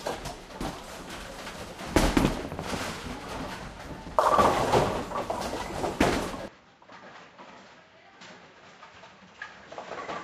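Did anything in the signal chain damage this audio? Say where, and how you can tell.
Yes. Capture stage: at 6.48 s the input likely switched to a poorer device. With no gap, everything above 7.6 kHz vanishes and the level drops about 10 dB.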